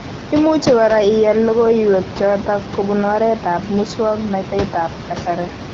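No technical faults occur anywhere in this speech clip.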